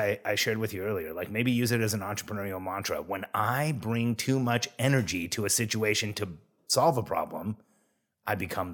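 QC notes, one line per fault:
Nothing stood out on listening to this speech recording.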